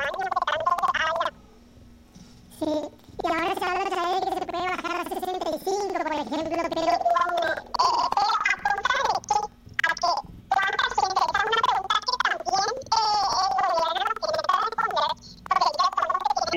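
From start to finish the whole clip has the planar audio read as interleaved problem. Each block of roughly 93 ms, which fits a 4096-sample block, stores all of one channel and then all of the other, but the player treats it as alternating left-right pairs. So every block plays twice at double speed, left then right. With blocks that long you hear the sound a full octave high, with a flutter at about 10.8 Hz, though the overall pace stays correct.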